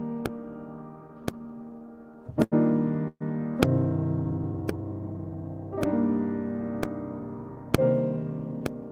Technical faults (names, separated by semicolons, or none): repeated stalls (stutter); call audio freeze; jitter buffer slow-down; jitter buffer speed-up